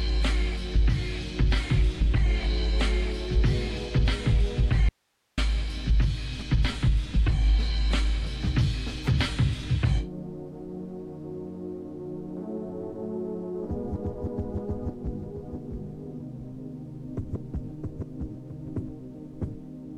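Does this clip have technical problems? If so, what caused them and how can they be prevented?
Yes. From 4.89 to 5.38 s the sound cuts out abruptly, leaving only hiss about 45 dB down. This audio dropout to a faint residue likely came from the source briefly disconnecting while the recording path stayed live. Secure connectors and cables to prevent it.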